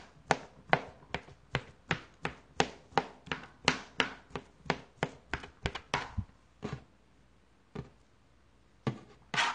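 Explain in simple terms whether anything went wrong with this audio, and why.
Something did go wrong, from start to finish: everything above about 10.1 kHz is simply gone, so the sound comes across dull and a bit smeary, with a warbly, fizzy edge. That's likely AAC compression squeezed hard, throwing away detail to save space.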